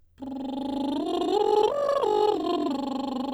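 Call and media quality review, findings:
Time-stretched section, 0.97–2.69 s: music abruptly runs 1.89x fast at unchanged pitch, rushed. Likely software dropping short segments to squeeze length.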